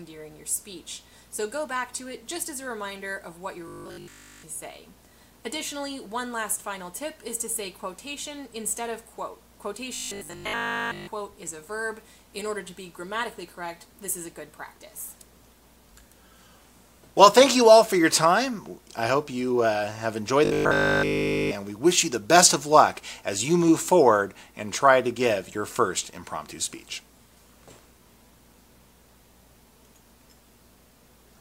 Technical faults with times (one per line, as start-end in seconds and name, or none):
3.68-4.44 robotic sound from repeated short buffers
9.95-11.07 robotic sound from repeated short buffers
20.45-21.55 robotic sound from repeated short buffers